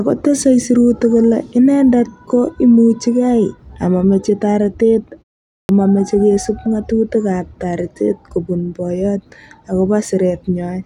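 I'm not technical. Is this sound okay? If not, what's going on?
No. After a short pause of about 0.3 seconds, the playback device dozed off and took a moment to wake. That is a clipped start after a pause: between 5.46 and 5.69 s, right after "amameche taretet", roughly a quarter second vanished, so "mameche kesup ngatutik ap" begins abruptly, missing its opening.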